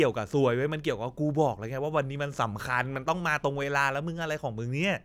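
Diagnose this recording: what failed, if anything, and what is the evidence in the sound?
Nothing in this recording points to a failure at any stage of the chain. The speech comes through with no audible event that would need diagnosing.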